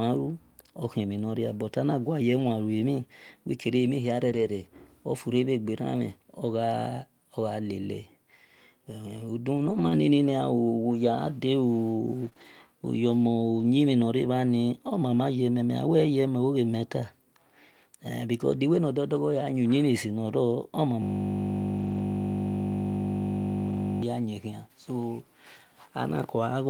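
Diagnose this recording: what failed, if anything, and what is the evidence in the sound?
Network stage: lost packets rebuilt from error correction at 2.39, 4.29, 9.57, 12.25, 12.37, 13.60, 21.78 and 23.68 s. The low-bitrate copies sound rougher and noisier.

Network stage: short concealed packet loss at 12.29 and 12.33 s. Each missing 20 ms was filled by extending prior sound, giving a brief smear.

Driver or buffer stage: a system hang loop from 21.02 to 24.03 s. A 20 ms piece repeats as a 50 Hz buzz until "ya yin khian".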